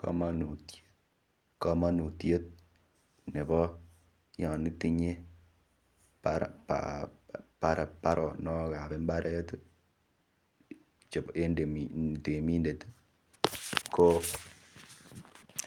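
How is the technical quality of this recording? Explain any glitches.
The technical quality of this recording is sound, with no glitches to explain.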